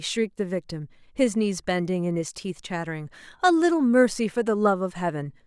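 No faults can be heard anywhere in this recording.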